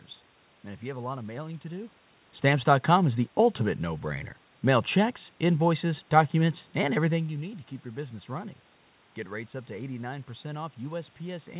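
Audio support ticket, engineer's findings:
No system fault found; room noise and level shifts near 2 s and 7 s track talker movement, and the band-limit at 4 kHz fits a G.711 mu-law call path.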